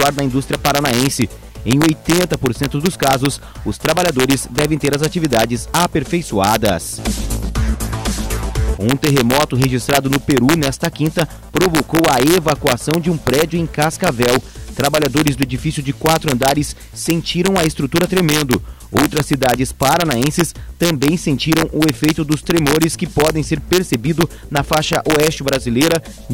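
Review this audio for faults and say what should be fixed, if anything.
Integer overflow throughout: peaks pushed about 1 dB past full scale wrap to the opposite sign, producing sharp cracks on a small fraction of loud moments. Prevent it by saturating or limiting gain stages and sums instead of letting integer arithmetic wrap.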